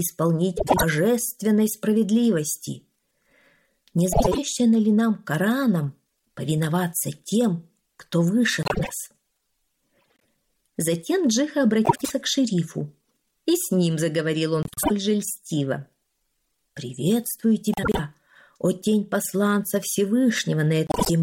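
Frames out of order occur at 0.57, 4.12, 8.63, 9.98, 11.85, 14.63, 17.73 and 20.87 s. Each time, two adjacent runs of about 96 ms are swapped (72 ms at the last). Each stretch plays with its halves exchanged, giving a garbled flutter. No time is lost.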